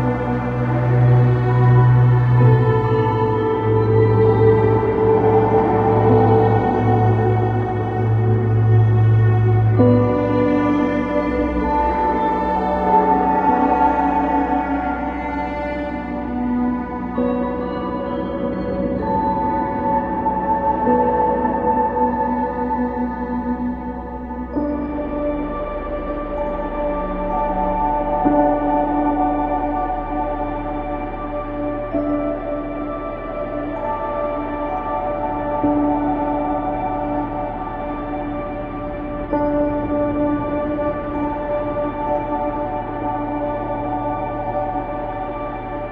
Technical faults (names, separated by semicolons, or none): none